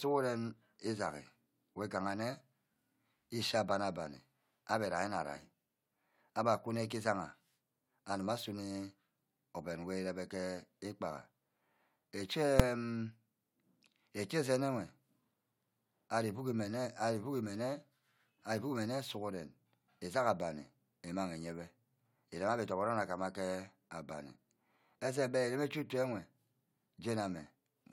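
A speech recording with a single sharp bang at 12.60 s, caused by invalid numbers at full scale. A calculation produced infinite or invalid values, and these were forced to the largest possible sample value for one processing block. That block lasts only about 2.7 ms, which fits a 128-sample block, so the start and end clicks merge into one bang. On the waveform it shows as a brief flat-topped slab pinned at one extreme value, far beyond the speech peaks. On a spectrogram it appears as a thin bright vertical stripe across all frequencies.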